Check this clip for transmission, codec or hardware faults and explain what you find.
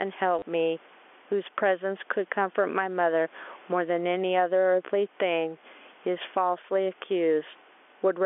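Two faults stand out: a pumping level through the whole recording and a brief stutter near the start.

Gain pumping runs throughout. The level swings by around 10 dB, squashing loud and soft parts together. The likely cause is input gain set far too high, with a fast limiter pulling it down on every peak.

Packet loss with the last packet repeated occurs from 0.39 to 0.42 s. About 30 ms of audio went missing, which fits three 10 ms packets, and the receiver replayed the final good packet to fill the gap. The run has a short robotic stutter. Concealment that fades to silence or smooths the gap would not produce this mechanical repetition. The line's narrow 300 Hz to 3.4 kHz telephone band and faint background are part of the call path and room.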